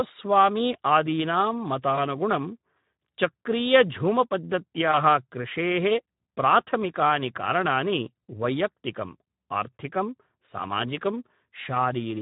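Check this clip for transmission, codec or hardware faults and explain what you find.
Two faults turn up: Speex codec damage across the whole recording, and two short patches of VoIP packet loss concealed by the speech codec.

The Speex coding is plainly audible from start to finish. The voice comes across hoarse and grainy, with a noisy edge, which fits a low setting somewhere around 11 kbps. Speex is a CELP codec that models the vocal tract with a filter and then codes the excitation driving it. At a rate like that, there aren't many bits for the excitation, so the buzz and breath under the voice get rough and approximate.

The first dropout is at 1.96 to 1.99 s. The sound briefly smears into a stretched tone or coloured noise that sags in level before normal speech catches up. That's the decoder covering a gap, which fits a single lost 20 ms packet. It keeps repeating its last pitch and filter while turning the gain down. 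Because each frame builds on the one before, the roughness hangs on a touch after the packet stream returns.

The second dropout is the same thing at 4.91 to 4.97 s, just before "कृषेः प्राथमिकानि कारणानि वैयक्त्तिकम्". Again it sounds like a brief smear that fades, and again it fits one lost 20 ms packet, patched over by extrapolating the previous frame's pitch and spectral shape at falling gain. There's a short stretch of weakened, distorted sound as the decoder settles back in.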